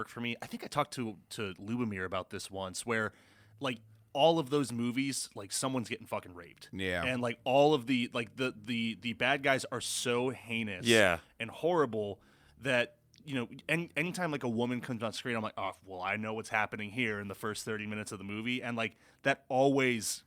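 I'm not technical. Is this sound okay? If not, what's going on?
Yes, nothing in this recording points to a technical problem with how the sound was captured or delivered.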